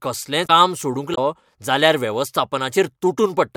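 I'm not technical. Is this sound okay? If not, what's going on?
No. Part of the compressed file holding this speech is corrupted, so it has damaged data in a compressed stream. The player loses its place and hunts for the next good chunk, giving brief glitches from 0.43 to 0.50 s and 1.11 to 1.18 s.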